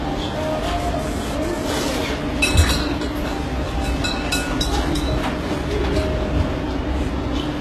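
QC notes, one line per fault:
Throughout: transcoding between lossy codecs. Nothing is present above 12.3 kHz. Two different kinds of coding damage are heard together. The likely cause is a chain of lossy codecs, an HE-AAC stage at about 16 kbit/s followed by Vorbis at about 34 kbit/s. The second encoder spends its bits on the first one's errors and adds its own. The lowest cut-off in the chain remains.
0.80–1.89 s: GSM phone buzz. A hard, raspy buzz appears at 217 Hz with a dense stack of harmonics. It sits about 12 dB below the sound and has no relation to it. It stutters on and off rather than holding steady, which fits a nearby 2G phone transferring data. The phone transmits in bursts 217 times a second. The audio circuitry rectifies those radio pulses and turns them into audible noise.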